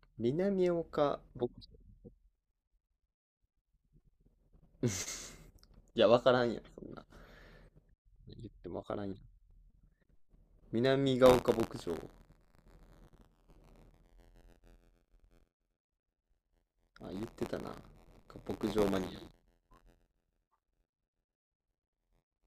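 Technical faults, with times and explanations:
11.25 s to the end: buffer tearing. A steady robotic rattle at 86.1 Hz, which fits a 512-sample buffer, as a small slice of each period replays audio from a few tens of milliseconds earlier between hard joins. Unlike dropouts, nothing goes silent, and pauses stay clean.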